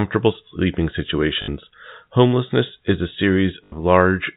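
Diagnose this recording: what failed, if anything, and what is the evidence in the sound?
Network: packet loss with last packet repeated, 1.42–1.48 s and 3.64–3.72 s. Waveform shows identical repeated blocks; spectrogram shows a buzz at the packet rate, repeats spaced 20 ms apart.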